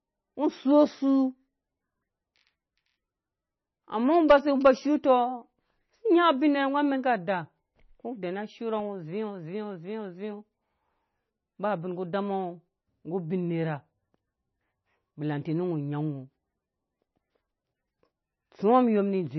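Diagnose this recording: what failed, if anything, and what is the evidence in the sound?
The speech is dull with nothing above 6 kHz, and it sounds watery and swirly throughout, with smeared consonant attacks. That points to the codec stage, likely heavy MP3 compression at a very low bitrate, around 20 kbps. A plain low-pass filter would cut the treble without the flickering, swirling texture.

GSM signalling bursts from a nearby 2G phone enter the analogue wiring from 4.14 to 4.86 s. The circuit rectifies the radio bursts into a galloping dit-dit-dit of short 217 Hz buzzes, roughly 20 dB below the speech. Steady mains hum would not pulse like this.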